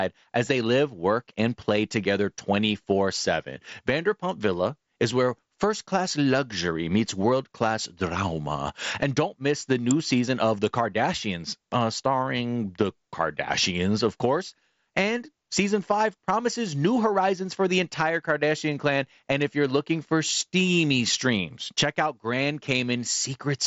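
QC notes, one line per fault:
9.91 s, electrical switching spike: a sharp snap lasting about a millisecond lands on top of the speech. It is likely a brief arc from a nearby switch or motor that the audio line picked up and passed through the mSBC headset path, which stops near 7.7 kHz.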